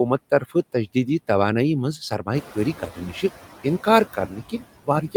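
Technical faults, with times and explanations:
Throughout, noise suppressor artifacts: the suppressor pulls the steady background down by about 13 dB frame by frame. The noise sinks in the gaps and swells back under the talking. It's worse once the room noise jumps about 14 dB around 2.5 s.
1.98–2.28 s, 2.8–3.23 s and 4.13 s to the end, speech cut by the noise suppressor: it mistakes quieter bits of speech for noise and ducks them with the background, by about 15, 11 and 22 dB at worst. Those sounds come out swallowed or faint, only briefly in the first two, and hardest in the last stretch.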